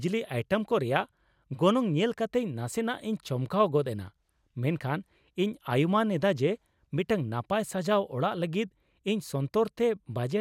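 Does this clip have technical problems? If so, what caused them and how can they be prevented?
No, there's nothing here that needs fixing, so there's no cause to track down and nothing to guard against.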